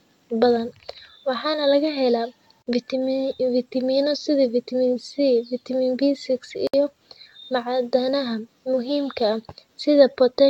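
Separately encoded pieces of this speech were joined without trimming the encoder's start delay and end padding, leaving a gap at each join of encoded pieces: gaps of 51 ms at 2.62 s and 64 ms at 6.67 s, recurring every 4.0 s, after which the speech resumes where it stopped.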